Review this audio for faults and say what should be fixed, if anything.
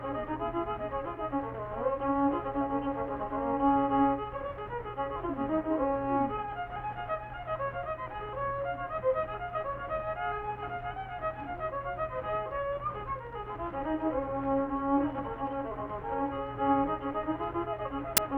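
At 18.17 s, right at the end, there is a sudden burst of very loud white noise lasting about 12 ms, with hard edges on both sides. This is file tags played as audio: the embedded cover picture, stored as compressed image data, has been read by the decoder as if it were sample values. Because compressed bytes are close to random, they decode as loud, flat-spectrum static rather than a tone or a rasp. To fix it, trim that final burst, and prevent it by using a decoder or export tool that parses the container correctly and skips metadata and artwork blocks instead of treating them as audio.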